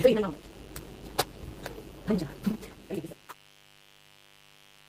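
From start to finish a mains buzz runs under the sound. Spiky interference from a dimmer, rectifier or unshielded cable has leaked in at twice each 50 Hz cycle, sitting roughly 25 dB below the signal and giving a constant raspy edge. On a spectrogram it shows as a comb of thin horizontal lines at 50 Hz multiples stretching up into the kilohertz range, and on a zoomed waveform as regular sharp ticks every 10 ms.

Between 2.51 and 2.55 s there is a short concealed packet loss. About 20 ms of audio never arrived in time, and the decoder papered over roughly 14 ms of it by extending the preceding sound before crossfading back into the real signal. It is heard as a quick smear or wobble. On a spectrogram the preceding texture stretches briefly with softened detail, and the waveform shows a repetitive, slightly out-of-place stretch at the joins.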